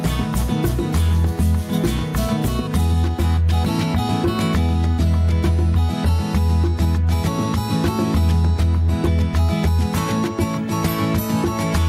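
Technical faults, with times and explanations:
Throughout, gain pumping: the level ducks by about 10 dB under loud sounds, likely a hot input with a fast limiter squashing everything.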